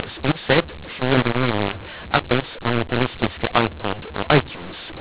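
From start to finish the speech is mangled by mu-law and A-law mixed up: A-law bytes decoded as mu-law scramble levels, making sound harsh, and pauses hiss rather than falling silent, unlike clipping.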